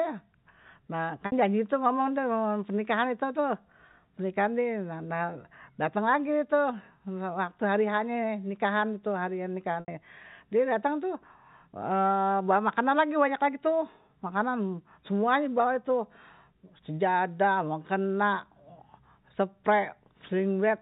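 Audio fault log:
1.26–1.32 s and 9.80–9.88 s, packet loss with pitch repetition: gaps of 60 ms and 80 ms, which fits three and four 20 ms packets going missing. The receiver loops the last pitch period to cover each gap, so you get a short buzzy hold that fades away before the speech cross-fades back in.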